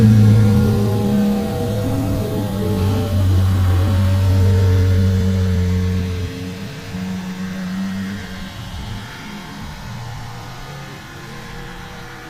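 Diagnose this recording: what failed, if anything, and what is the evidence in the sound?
Nothing failed in this recording; the sound gives no evidence of a fault at any stage.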